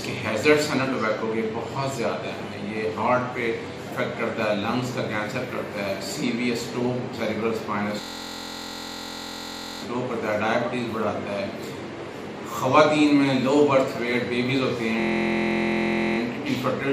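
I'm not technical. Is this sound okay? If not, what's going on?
No. A system hang loop at 8.01–9.82 s and 15.0–16.18 s: the computer froze and replayed one 23 ms slice, making a steady buzz rather than silence or crackling.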